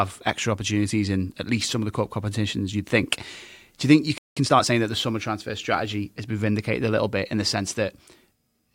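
A playback stall hits at 4.18 s, just after "do you think you": the speech cuts to silence for about 0.19 s, until 4.37 s, and then resumes. The likely cause is the player running dry of buffered data, or its output thread being briefly blocked.

Time-compressed catch-up follows from 4.37 to 4.73 s, ending before "that the summer transfer". To recover the lost time, the player trims and cross-fades small slices of the backlog, so the speech runs hurried at about 1.5x speed with unchanged pitch.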